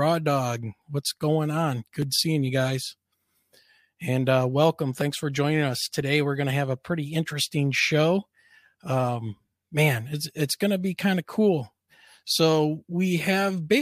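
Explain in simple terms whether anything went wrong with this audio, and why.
Small ticks interrupt the speech from 1.02 s to 6.01 s, about once every second. These are periodic USB or driver dropouts. A background task briefly stalls the audio path, so about a millisecond of sound is skipped each time, roughly seven times.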